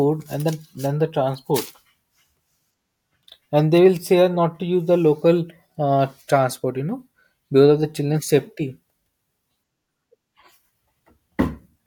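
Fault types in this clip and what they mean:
No technical faults can be heard anywhere in the recording. The speech comes across with no audible dropouts, clicks, distortion or level problems.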